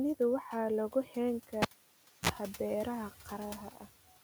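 At 1.06 to 1.15 s, there is speech cut by the noise suppressor. The suppressor mistook a short stretch of speech for background noise and pulled it down. The dip reaches about 6 dB at its deepest. It lasts roughly a tenth of a second. That part sounds swallowed and faint. The room noise sits about 21 dB below the speech.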